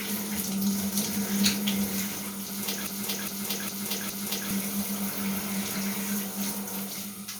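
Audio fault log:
2.87–4.51 s broken-record loop: a 0.41 s fragment of the audio plays four times back to back, identical each pass, and the material that belonged in that span never arrives. The likely cause is a stalled player or stream re-sending its last buffered fragment.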